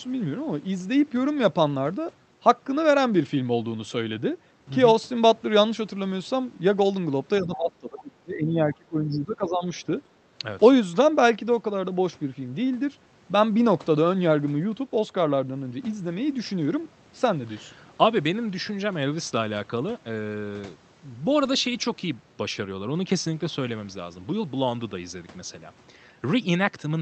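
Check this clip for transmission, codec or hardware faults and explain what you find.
Speech suppressed in double talk, from 7.42 to 9.68 s: the talker's level sinks by about 25 dB at its deepest, for roughly two seconds in total. The likely cause is an echo canceller that couldn't separate this talker from the far end's loudspeaker echo while both sides spoke at once, so it attenuated everything it heard as echo. The high end also disappears above a cut-off near 8 kHz, which fits a call codec such as Opus at around 32 kbps.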